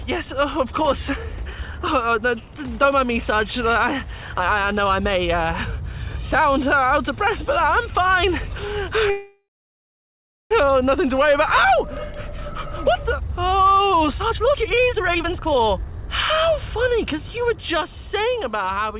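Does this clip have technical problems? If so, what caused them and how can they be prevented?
Yes. From 9.1 to 10.53 s there is a call audio freeze: the last sound is drawn out as a fading buzz or hiss, then about 1 s of silence. Packets were likely held up in transit, so the jitter buffer ran empty. Unlike a dropout, nothing is lost; the audio resumes where it stopped, just 1.4 s later. A larger or adaptive jitter buffer and a steadier network path would prevent it.

From 14.14 to 18.38 s a jitter buffer speed-up plays the audio at 133% speed, trimming roughly one and a half seconds. Pitch stays put, unlike a resampling speed change, because whole pitch periods are cut repeatedly. Draining excess buffered delay more gradually would prevent it.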